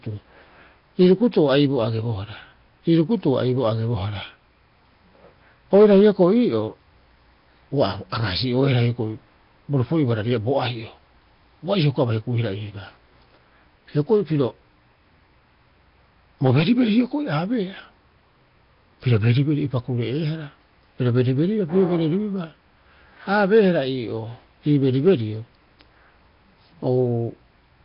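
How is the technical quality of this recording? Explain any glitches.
Technical quality is poor, with heavy codec damage throughout the speech. The rough, hissy, underwater smearing is likely Nellymoser compression at a rate fitting about 22 kbps: starved bands are filled with noise. A spectrogram shows a hard ceiling at 5.3 kHz and speckled, noisy patches in between.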